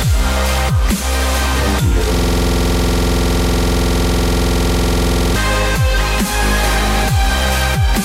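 At 2.14 s the sound locks into a system hang loop and stays there until 5.36 s. The machine or its audio driver has frozen while the hardware keeps replaying the same ring buffer, so one 46.44 ms slice of audio repeats over and over, which fits a 2048-sample buffer. Cycling at 21.5 Hz, it comes across as a rough, rapid stutter, almost a coarse buzz, repeated dozens of times before normal playback returns.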